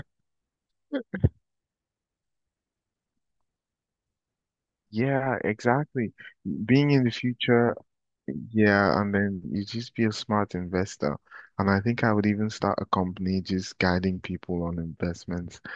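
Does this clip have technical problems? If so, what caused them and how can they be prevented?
No, the speech signal shows no audible technical faults, with steady level and continuous audio throughout.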